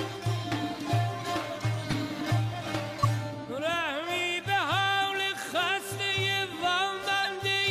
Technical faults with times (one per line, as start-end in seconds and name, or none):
1.89-1.93 corrupt frame decoded
3.03-3.05 corrupt frame decoded
7.23-7.26 corrupt frame decoded